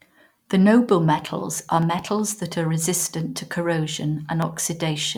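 Clock drift buffer slips, 0.53 to 4.42 s: about four regular clicks every 1.3 s in the speech, likely from two clocks roughly 300 ppm apart dropping or repeating small sample blocks.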